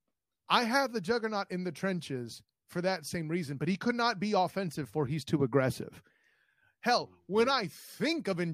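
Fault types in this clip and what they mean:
No technical faults detected.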